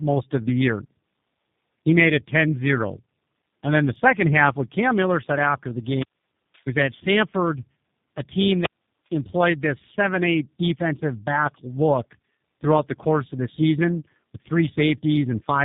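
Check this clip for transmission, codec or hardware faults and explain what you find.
One fault runs through the whole clip: tandem speech coding. From start to finish the speech sounds rough, muffled and warbly, with nothing above about 3.8 kHz. The roughness is heavier than a single low-rate speech coder would leave, which points to the call passing through two such coders in a row, likely a G.723.1-type and then a G.729A-type codec with a plain G.711 link between them. Each coder re-encodes the already damaged output of the one before, so their distortions stack.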